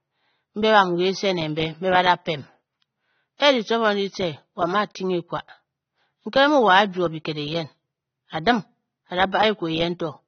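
From start to finish the speech sounds dull and smeared, with a watery, warbling texture on held vowels and a fizzy edge to sibilants, the likely result of AAC compression at a low bitrate, which fits something near 24 kbps. The encoder drops detail it judges inaudible and cuts the top of the spectrum. On a spectrogram, energy stops abruptly at about 6.3 kHz, and patchy gaps and blotches appear in the bands below.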